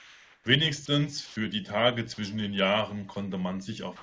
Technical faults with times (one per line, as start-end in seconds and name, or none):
0.00-0.46 comfort noise in place of the background
1.26-1.36 comfort noise in place of the background